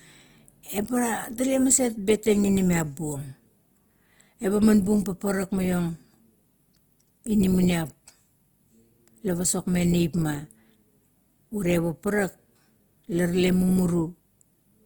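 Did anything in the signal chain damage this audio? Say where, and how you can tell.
Yes, at the codec stage, throughout the speech. The likely cause is Opus compression in its CELT mode: content extends to about 20.2 kHz, yet bands sound grainy and noise-filled rather than swirly, consistent with band energy preserved and detail replaced, which fits a bitrate near 24 kbps.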